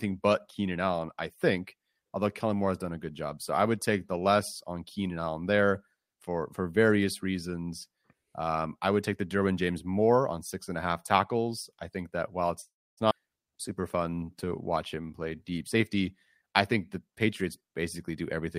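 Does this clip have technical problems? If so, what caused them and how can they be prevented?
Yes. A call audio freeze runs from 12.61 to 13.00 s: the sound is stretched out, then silent for about 0.28 s, likely because delayed packets emptied the jitter buffer. A stable, uncongested network path prevents it.

A skip ahead at 13.1 s drops roughly 0.3 s of speech and joins the two sides almost directly. It happens when a stretch of audio is dropped while later audio is already waiting. Avoiding bursty packet delivery prevents it.

Jitter buffer slow-down from 13.51 to 14.50 s (89% speed) and from 14.95 to 15.59 s (85%) repeats pitch periods to refill the buffer. Steadier packet arrival prevents it.

Jitter buffer speed-up from 15.64 to 18.47 s runs at 109% speed, trimming roughly 0.3 s to reduce excess delay. Lower network jitter prevents it.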